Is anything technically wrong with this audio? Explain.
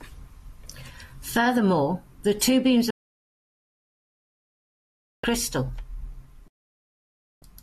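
Yes. Digital broadcast dropout: the receiver lost valid frames and muted until clean ones returned. Just after "the two beams", the speech cuts to silence within 3 ms from 2.90 to 5.24 s, and again from 6.48 to 7.42 s. Everything sent during those gaps is lost.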